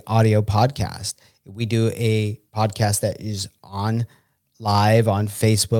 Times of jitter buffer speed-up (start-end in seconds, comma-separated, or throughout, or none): none